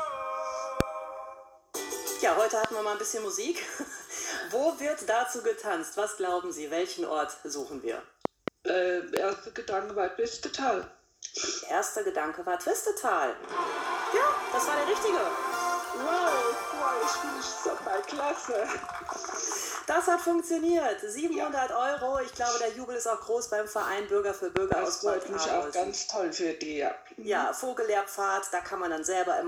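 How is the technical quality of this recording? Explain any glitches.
The recording is marred by seven loud pops: single pops at 0.80–0.83 s, 2.64–2.67 s and 9.17–9.19 s, and double pops at 8.25–8.50 s and 24.57–24.74 s. Each jumps roughly 20 to 25 dB above the sound, likely from a sudden voltage step such as static or a switching glitch. Unlike a dropout, the audio continues uninterrupted beneath each thump.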